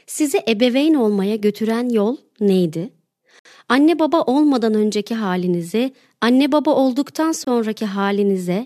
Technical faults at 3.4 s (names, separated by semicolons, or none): gap between stream segments